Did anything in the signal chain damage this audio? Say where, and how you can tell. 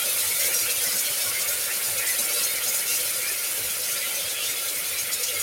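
No, nothing in the chain audibly damaged these sounds at any stage.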